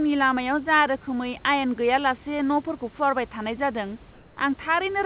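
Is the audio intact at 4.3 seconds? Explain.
No. From 4.13 to 4.37 s, just after "फुवारबाय थानाय जादों", the room background becomes a flat, featureless hiss about 2 dB quieter, likely comfort noise in place of the background after transmission paused.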